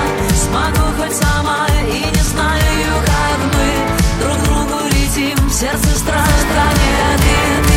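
At 6.18 s a doubled audio track begins and runs to the end of the clip: a second full-band copy of the sound appears abruptly, trailing the original by roughly 400 ms and sitting about 5 dB lower. It carries no decay or added room colour, so it reads as a clean, out-of-step repeat rather than an echo. The likely cause is the signal being captured again through a slower path and mixed back in.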